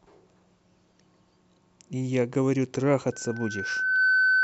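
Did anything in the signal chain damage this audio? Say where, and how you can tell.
Yes. At 3.12 s a loudspeaker feedback squeal starts and keeps going to the end of the clip at 4.44 s. This is an analogue, acoustic problem at the capture end: the microphone is picking up a loudspeaker that plays its own signal. A steady 1.5 kHz tone rises out of the speech over about a second and finishes roughly 5 dB above it. At that frequency the loop gain has gone above one, so the tone keeps feeding itself.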